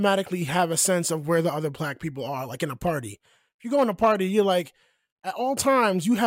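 At 2.07 s, after "where the other black", and at 2.87 s, after "are like in a", sharp single clicks are heard, likely dropped samples, each losing a fraction of a millisecond.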